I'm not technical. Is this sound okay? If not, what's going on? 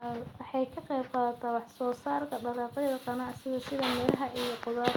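No. Between 4.08 and 4.14 seconds the speech briefly turns harsh and crackly, as if the loudest moment is being crushed. This is microphone overload, likely caused by the microphone's input level being set too high, so the loudest peaks got their tops sliced off.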